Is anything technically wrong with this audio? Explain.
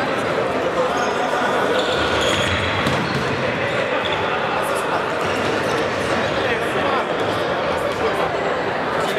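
Yes. From 1.32 to 2.98 s there is a doubled audio track: a second full-band copy trails about 150 ms behind, roughly 5 dB quieter, likely from a slower capture path. Unlike an echo, it has no decay or room colour and starts and stops abruptly.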